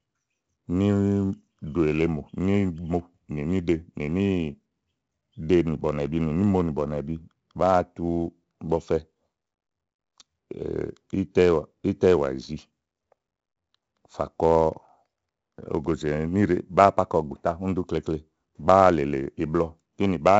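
From the first moment to the end, the speech carries 4-bit ADPCM compression. Each sample is coded as a small step from a predicted value, and the step size adapts as the signal moves. The damage here is heavy. A gritty hiss rides on every loud syllable and falls away in quiet gaps. Sharp onsets sound rough where the step cannot grow fast enough. Nothing reaches above 7.8 kHz, so the sound is dull, which fits 4-bit samples at 64 kbps and a sample rate near 16 kHz.

Between 1.14 and 1.86 s come CD scratch ticks. A blemish on the disc wipes out more data than error correction can rebuild, once per revolution. The player then patches or mutes the lost samples. Six short ticks fall in that window, at a steady rate. Each lasts only a couple of milliseconds at most. They sound like clicks of uneven strength laid over the speech.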